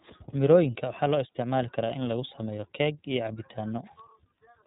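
From start to finish the speech carries iLBC codec damage, and it's plainly audible. Nothing gets through above about 3.8 kHz, so it sounds muffled and narrowband. Each frame is coded on its own, giving a slightly rough, synthetic edge that fits the 30 ms, 13.33 kbps mode.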